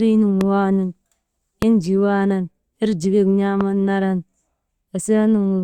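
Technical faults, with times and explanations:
0.41–0.43 s, 1.62–1.65 s (just before "enjii waanan erjikek") and 3.61–3.63 s (just after it): loud pop, three single pops of about 20 ms each, peaking around 10 dB above the speech. Each is a sharp thump laid on top of the voice, which carries on unbroken underneath. That distinguishes it from a dropout or buffer glitch, where the sound itself is cut or jumps. A sudden voltage step, likely from static or a switch, shaped by the following circuitry, explains the brief thumping pulse.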